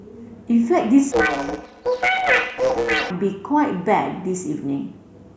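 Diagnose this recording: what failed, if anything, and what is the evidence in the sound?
The failure is at the sample-format conversion stage: planar audio read as interleaved. From 1.12 s to 3.11 s the speech turns into a robotic buzz at about 125 Hz, with no clear octave shift. That rate fits 8 ms blocks of 128 samples. Each block's left run and right run are read as alternating pairs, so each block plays twice at double speed, first left and then right.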